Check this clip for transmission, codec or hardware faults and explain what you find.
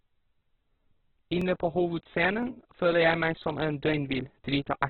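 Two faults are present: heavy codec damage across the whole clip, and a regular stutter from overlapping chunks.

Opus compression affects the entire clip. The speech is narrowband, with nothing above 4.4 kHz, and it sounds rough and grainy, with noisy texture where the voice should be clean. The likely cause is Opus at a very low rate, consistent with about 8 kbps in its CELT mode. At that rate the encoder narrows the bandwidth and fills starved bands with folded or noise content instead of leaving gaps.

Overlapping chunks produce a click or stutter at 0.40, 1.41, 2.43, 3.44 and 4.45 s, once every second. The one at 2.43 s falls just before "føler jeg meg", and the one at 3.44 s just after it. The audio was handled in 1 s chunks, each starting 12 ms before the previous one ended. That 12 ms of sound therefore plays twice at every join, giving a regular, periodic hiccup.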